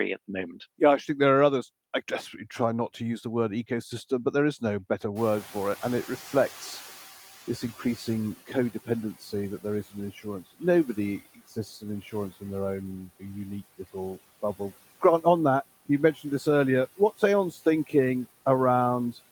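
Noise suppressor catching up, 5.15 to 8.36 s: after "there is no better", the room noise jumps by about 24 dB, and the suppressor's estimate trails it. The noise comes through with less reduction at first, then sinks by about 11 dB over 3.2 s before "codependency that there is".

Speech cut by the noise suppressor, 11.25 to 11.84 s and 16.14 to 16.25 s: the suppressor mistook parts of the speech for noise, dipping them by about 13 dB and about 10 dB. Roughly a tenth of a second sounds swallowed each time, the second between "on that you" and "this earlier".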